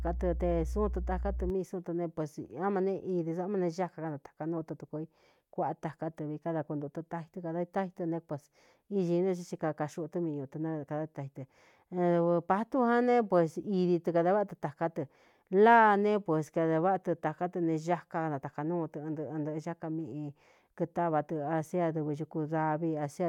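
A ground loop or nearby transformer couples the 60 Hz power line into the signal from 0.0 to 1.5 s, causing mains hum: a steady low tone with some low harmonics, loud enough to sit only slightly below the speech, ending just before "mii súu tɨ".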